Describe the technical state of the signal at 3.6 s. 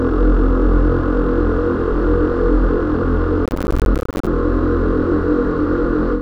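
At 3.6 s you're inside a stretch of processor overload crackle, running from about 3.46 to 4.27 s. The processor keeps missing its deadlines on what sound like roughly 10 ms buffers, dozens of them, and each miss drops a hard-edged gap of silence, so it comes out as gritty, tearing crackle.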